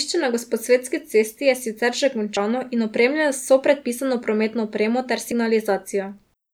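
At 2.37 s, after "cesti je sicer že", the speech skips forward. It happens again at 5.32 s, after "predpisano prometno opremo ter". Each jump drops around 50 ms. The 3 s spacing points to audio missing between chunks, likely lost at each chunk boundary.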